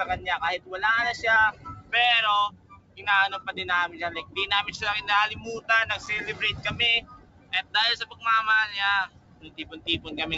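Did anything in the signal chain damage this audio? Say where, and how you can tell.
Yes. Held and fading parts of the sound keep sinking and recovering while attacks punch through, so the whole clip pumps with a level swing of around 20 dB. The deepest dips, about 13 to 17 dB, fall at 1.52–1.92, 2.49–3.06, 4.19–4.37, 5.35–5.69, 7.01–7.75, 8.02–8.24 and 9.07–10.08 s. This is a noise suppressor applied to music or sounds, left on in the call-processing stage. It treats sustained tones and tails as noise and turns them down.

At 6.06 s there is a sharp tick, a hole of about 5.8 ms that cuts to dead silence and back with no fade. That is a block of digital silence at the driver or buffer stage, which fits a 256-sample buffer left unfilled. The output was zeroed for one block, and the abrupt edges on either side cause the click. It sits apart from the G.722 call path's 8 kHz band limit, which the rest of the clip carries.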